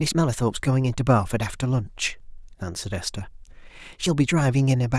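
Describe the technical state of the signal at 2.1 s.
At 2.10 s there's a small jump in the speech, as if a sliver of it just went missing, roughly a hundredth of a second. That's most likely a dropped buffer (overrun): the software didn't pull its samples off the hardware in time, they got overwritten, and the audio on either side was butted straight together. Since nothing fills the gap, you get a skip rather than a silence.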